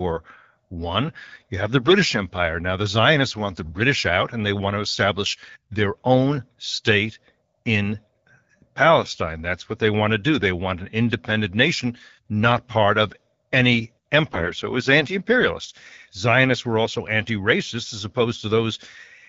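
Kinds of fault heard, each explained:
AMR bit errors: flipped unprotected bits misplace the codec's excitation pulses, making speech briefly hoarse and gargly at 3.64–3.72 s and more heavily at 14.30–14.52 s.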